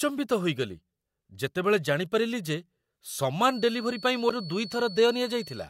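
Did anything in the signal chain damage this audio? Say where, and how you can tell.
Yes. A feedback whistle enters at 3.41 s and runs to the end: a thin, steady tone near 4.4 kHz, roughly 20 dB below the speech, wavering slightly. This points to the acoustic loop between loudspeaker and microphone, likely held just at the feedback threshold.

At 4.27 to 4.31 s there is damaged data in a compressed stream, at the codec or storage stage. A brief disturbance cuts through. The decoder misread corrupt frames there, lost sync and resumed at the next frame header.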